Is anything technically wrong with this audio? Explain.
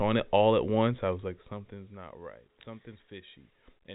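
No, nothing in this recording sounds technically wrong to me, so there's nothing here that needs fixing.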